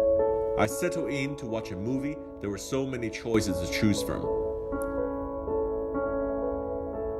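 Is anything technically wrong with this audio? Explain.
Yes. At 0.65 s a sudden gain jump drops the level by about 9 dB until 3.34 s, where it returns. Sound and background noise fall together, likely from a gain change applied without a ramp. The waveform shows an abrupt step down, and the spectrogram darkens uniformly across all frequencies.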